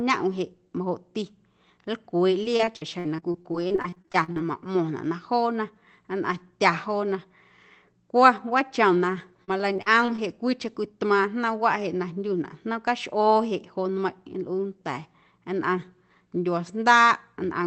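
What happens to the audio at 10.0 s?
At 10.0 s the speech is inside a burst of repeated packet loss (robotic sound) running from 9.44 to 10.20 s. Six separate dropouts fall in that stretch, the longest about 38 ms. Each hole was papered over by stretching the preceding sound, so about 140 ms of real audio is missing, roughly a fifth of the span. The result is a choppy, robotic stutter over a signal already limited to about 8 kHz by the call codec.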